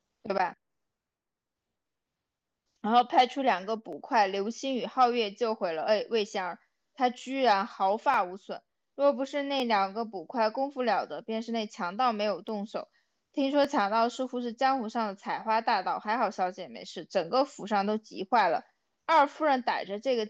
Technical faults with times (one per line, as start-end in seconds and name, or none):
3.93 dropped samples
8.14 dropped samples
9.60 dropped samples
12.49 dropped samples
13.65 dropped samples